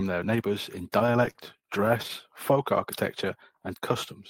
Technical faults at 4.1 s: none

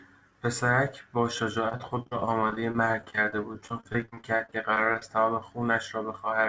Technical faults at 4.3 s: repeated packet loss (robotic sound)

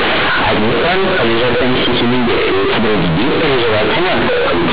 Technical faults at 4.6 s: companded audio read as linear

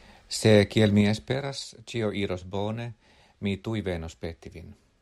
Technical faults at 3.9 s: none

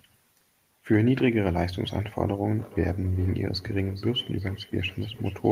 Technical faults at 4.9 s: feedback echo between two devices

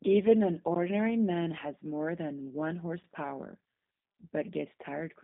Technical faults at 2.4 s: G.729 codec

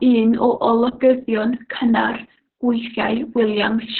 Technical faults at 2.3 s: Opus voice compression

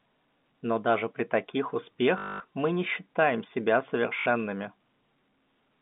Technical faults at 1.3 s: none

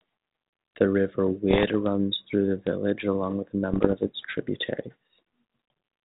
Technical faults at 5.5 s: none

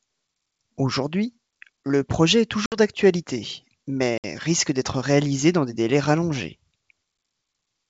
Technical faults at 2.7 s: packet loss on an ADPCM call

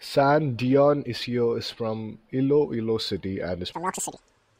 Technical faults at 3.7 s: section at the wrong speed

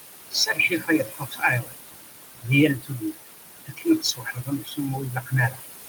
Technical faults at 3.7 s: noise suppressor artifacts; speech cut by the noise suppressor

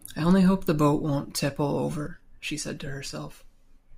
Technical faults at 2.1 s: one channel drops out

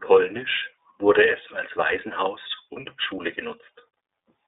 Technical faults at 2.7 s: iLBC codec; lost iLBC frames

